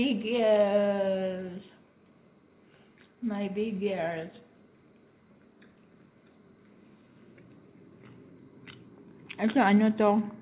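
No faults can be heard anywhere in the clip. It has come over a WebRTC call path, and nothing above 4 kHz survives, which fits G.711 A-law coding at 64 kbps.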